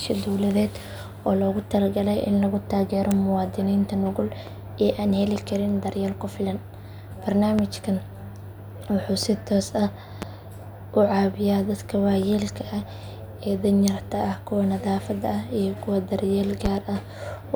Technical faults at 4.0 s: none

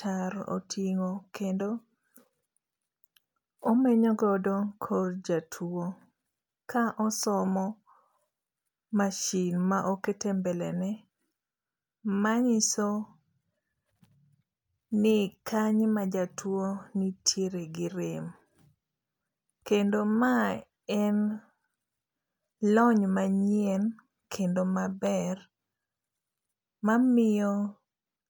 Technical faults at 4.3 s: none

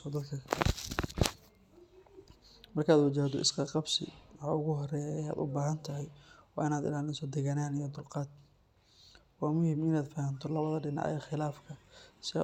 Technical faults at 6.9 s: none

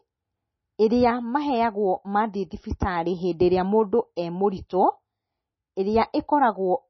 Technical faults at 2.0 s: MP3 compression

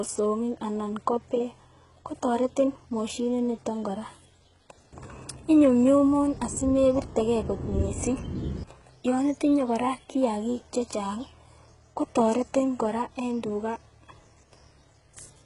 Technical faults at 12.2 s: HE-AAC compression

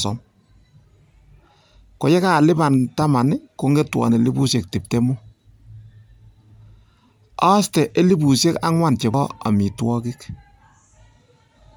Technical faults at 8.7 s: none

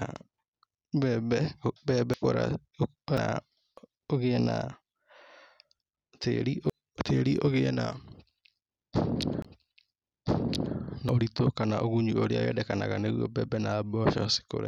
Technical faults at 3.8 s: dropped buffer (overrun)

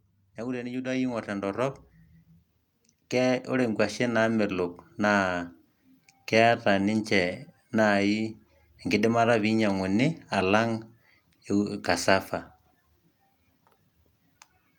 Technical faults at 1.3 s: automatic gain rising

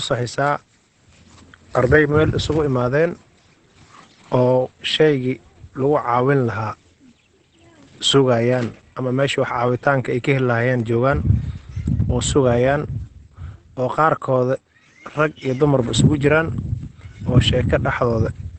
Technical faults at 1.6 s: Opus compression

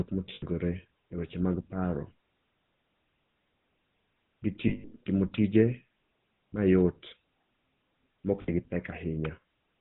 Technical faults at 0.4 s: GSM full-rate codec; lost GSM frames

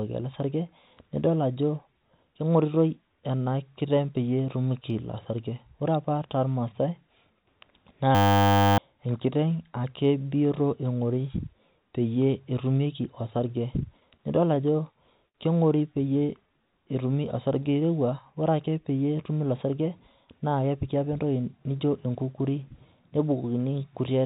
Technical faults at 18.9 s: jitter buffer speed-up

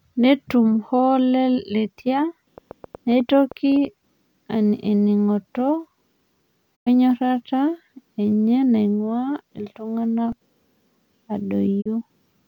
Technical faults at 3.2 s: train of clicks

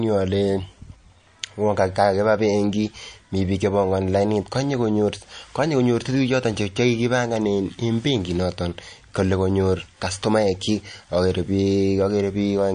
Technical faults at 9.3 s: MP3 compression

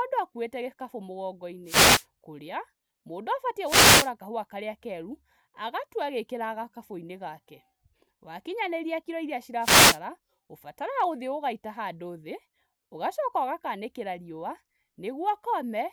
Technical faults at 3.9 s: wireless microphone noise hit

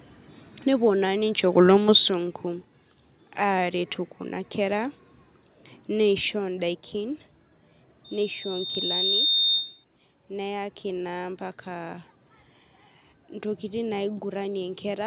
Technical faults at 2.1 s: microphone volume stepped down

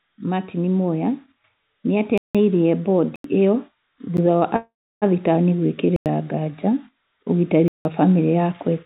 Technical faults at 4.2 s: block of digital silence

